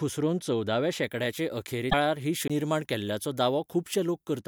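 Pre-emphasis left on, from 1.03 s to 4.39 s: the speech suddenly turns thin, bright and hissy, with sibilants pushed forward. The treble lift that was added before recording or transmission was never undone on playback, leaving 10 kHz about 11 dB louder relative to 1 kHz. The shape of the tilt points to the 50-microsecond curve used for FM broadcast, boosted here with no matching de-emphasis.

Damaged data in a compressed stream, from 1.87 s to 1.94 s: a short glitch cuts across the speech for about 70 ms. Part of the compressed data at this point is corrupt, so the decoder can't read those frames properly. It loses its place in the stream and hunts for the next valid frame header before playback settles again.

CD skip at 2.48 s: a brief mute of about twenty milliseconds, after which the speech carries on from a different point. A disturbance or a flaw on the disc threw the laser onto another turn of the spiral. 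The player silenced its output for an instant while it relocked, then resumed from the new position, so the passage no longer runs continuously.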